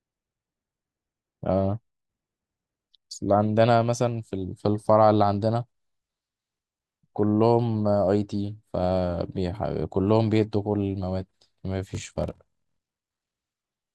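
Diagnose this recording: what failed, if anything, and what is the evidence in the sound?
Buffer stage: block size mismatch (padded), 11.93 to 13.35 s. A 41.7 Hz buzz and speech slowed to 0.889 speed at unchanged timbre fit zero-padded 1024-sample blocks.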